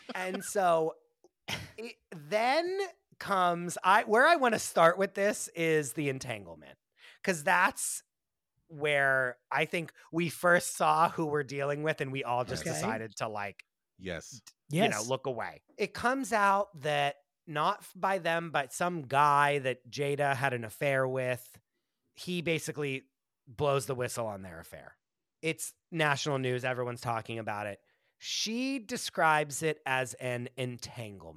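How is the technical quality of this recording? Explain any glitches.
The speech has one clear glitch, running from 24.87 to 26.84 s, between "the whistle on their" and "talking about it". For about two seconds the voice turns dull and loses its treble, while a gritty, grainy noise rides under it, then clarity snaps back. It is a Bluetooth SBC bit pool drop: the link got congested and the encoder cut its bit budget, starving the upper sub-bands and quantising the rest coarsely. The change fits a bit pool falling from 31 to 15, around 105 kbps.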